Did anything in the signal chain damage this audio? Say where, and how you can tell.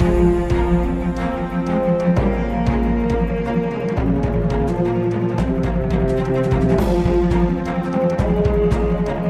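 Yes. From 3.00 s to the end, the sound runs at about 1.9 times its earlier pace, yet pitch holds steady. It turns rushed. That points to a time-stretched section, likely from software dropping short pieces to squeeze the audio.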